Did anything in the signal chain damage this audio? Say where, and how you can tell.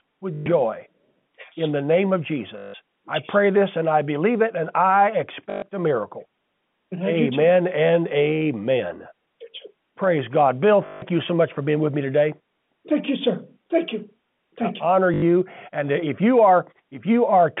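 Yes, at the network stage: packet loss with the last packet repeated, heard as short robotic stutters at 0.34–0.46 s, 2.58–2.74 s, 5.50–5.62 s, 10.86–11.02 s and 15.14–15.22 s, lasting 80 to 160 ms. The receiver replayed one short chunk, which fits 20 ms packets, so each run buzzes at 50 Hz. A spectrogram shows identical repeating slices. The waveform shows one segment tiled end to end. The narrow G.711 telephone band is audible throughout.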